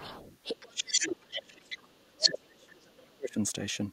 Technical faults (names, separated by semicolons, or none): other side's voice leaking through; speech suppressed in double talk